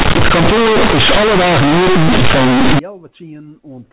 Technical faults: companded audio read as linear

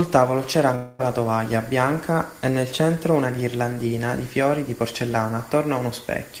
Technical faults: long network dropout

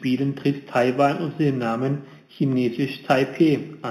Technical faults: imaging from linear upsampling

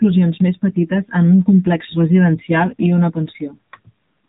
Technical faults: AMR narrowband mobile codec

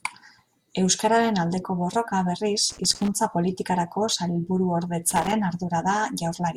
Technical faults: loose connector crackle

